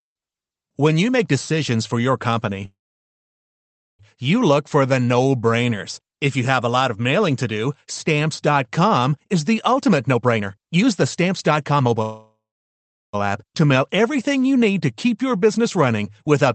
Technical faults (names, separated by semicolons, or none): call audio freeze; jitter buffer speed-up